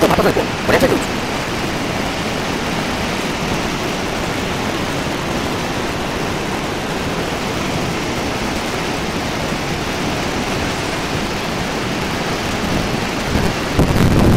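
A block size mismatch (truncated) runs through the whole clip. The audio carries a steady buzz at 188 Hz and plays 1.88 times too fast while keeping roughly its normal pitch. One stage writes longer blocks than the next reads, so the tail of every block is lost. The buzz rate fits a 256-sample read. A plain speed-up or wrong sample rate would raise the pitch, and a padded mismatch would slow the audio with gaps instead.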